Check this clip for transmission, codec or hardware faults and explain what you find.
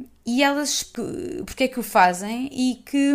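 One fault stands out, a CD skip at 0.95 s, just after "e elas". The laser has been knocked or thrown by a flaw onto another turn of the disc's spiral, so the player mutes very briefly, about a hundredth of a second, and resumes from a different point. It is heard as a small tick followed by a sudden jump in the speech. Unlike a plain dropout, which resumes in step once the gap ends, the sound continues from somewhere else.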